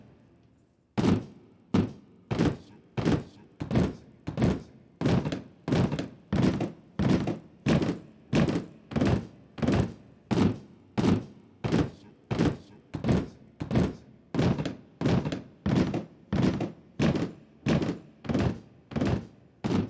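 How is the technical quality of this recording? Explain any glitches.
The quality is compromised by a periodic buzz over the first part of the audio. Resampler restarted on every block, 0 to 13.9 s: each 40 ms block was converted separately, probably down from 48 kHz to 16 kHz, leaving edge errors heard as a 25 Hz buzz under the signal.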